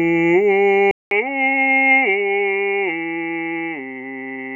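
At 0.91 s the music drops out for about 200 ms and returns duller and slightly quieter, roughly 5 dB down. This is most likely an input switched to a poorer device. From there to the end, nothing survives above 3.8 kHz, and a faint new noise floor sits far beneath the signal. A spectrogram shows a brief blank column, then a hard ceiling at 3.8 kHz. The waveform shows a flat gap, then a lower envelope.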